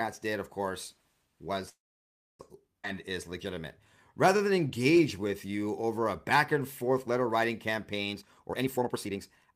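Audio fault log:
1.69–2.41 s, call audio freeze: the sound halts for about 0.7 s, a brief fading fill then about 0.6 s of silence, likely from held-up packets emptying the jitter buffer; nothing is lost.
2.83 s, skip ahead: playback jumps forward with almost no gap, dropping roughly 0.3 s of speech, and both sides are spliced together.
2.94–3.63 s and 4.27–6.96 s, jitter buffer slow-down: repeated pitch periods stretch the speech to 95% and then 92% speed, adding 46 ms and 228 ms, drawn out at unchanged pitch.
8.13–9.55 s, jitter buffer speed-up: short pitch-period pieces are cut repeatedly, removing about half a second so speech runs at 133% speed, hurried but at the same pitch.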